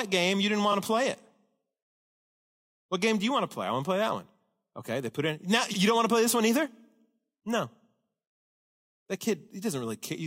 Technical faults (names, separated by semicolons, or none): repeated frames